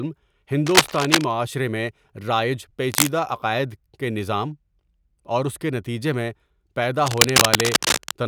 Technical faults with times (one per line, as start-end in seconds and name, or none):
0.66-1.24 cable scratch noise
2.92-3.09 cable scratch noise
7.06-8.12 cable scratch noise